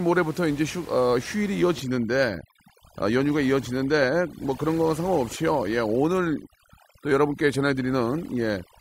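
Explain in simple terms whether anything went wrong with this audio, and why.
Overdone noise removal runs from 1.76 s to the end. A noise reduction tool set too strong shuts off frequency bands near its idea of the background, taking quiet parts of the voice along. The background drops and breaks up into twinkling specks. The room noise underneath is ordinary background sound.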